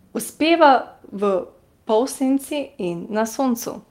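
Clock drift between sender and receiver runs through the whole speech clip: the sender's clock is roughly five percent fast, so the receiver's buffer keeps overfilling rather than suffering random network losses. Repeated timing corrections follow from 0.05 s to 3.9 s, with the receiver trimming short pieces to match a 105% rate. Unlike packet-loss gaps, these are small, same-direction hiccups at uneven spacing.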